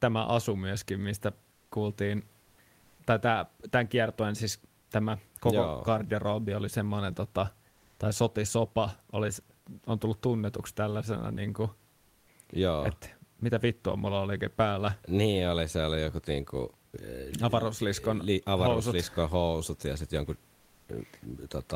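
A speech recording whose room noise, sitting about 38 dB below the voice, is replaced by comfort noise in place of the background in six pauses: 1.51–1.71 s, 2.41–2.57 s, 4.79–4.89 s, 7.69–7.99 s, 11.91–12.27 s and 20.55–20.87 s. In each, the textured room hiss turns flat and featureless and drops about 1 to 6 dB. On a spectrogram these gaps show as smooth, uniform noise bands, and the waveform shows a slightly lower, even floor. The likely cause is Opus discontinuous transmission synthesising noise while speech is absent.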